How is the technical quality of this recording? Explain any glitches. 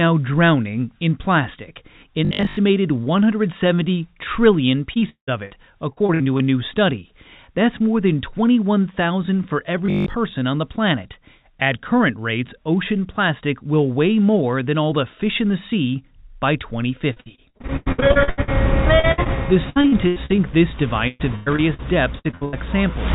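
The recording has two recurring faults: a short mechanical buzz and repeated bursts of choppy, patched-over sound. The whole clip also passes through a narrowband call path with nothing above 4 kHz, which fits G.711 mu-law telephone coding at 64 kbps.

Robotic sound from repeated short buffers occurs at 2.25–2.57 s and 9.86–10.16 s. For most of each stretch, the same tiny slice of audio repeats, forcing a steady 50 Hz buzz. That pitch fits a 20 ms buffer being replayed, likely because fresh audio was arriving too slowly. This fault is a rigid, metallic buzz at a constant pitch that follows the speech only roughly, which sets it apart from packet loss.

Repeated packet loss (robotic sound) occurs at 4.94–5.52 s, 5.92–6.42 s, 17.14–18.49 s, 18.99–19.30 s, 19.70–20.40 s, 21.08–21.81 s and 22.19–22.55 s. Within each burst, pieces go missing and are patched by extending the previous sound, covering roughly 30 to 60 percent of the span. 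The densest stretch is 17.14–18.49 s, with about 15 holes. The longest single gap is 0.18 s, at around 5 s. This fault sounds irregular and stuttering, with holes of varying length, unlike the steady buzz.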